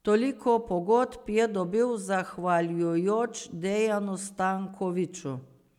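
No technical faults are audible anywhere in the audio.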